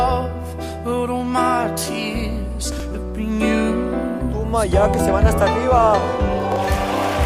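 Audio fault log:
2.72–2.80 s, chunks out of order: a 20 ms chunk arrives three chunks late and plays after the audio meant to follow it, giving a brief jumbled stutter with three hard joins.
6.52–6.56 s, chunks out of order: a 20 ms chunk plays one chunk late, swapping with its neighbour, a shorter garble.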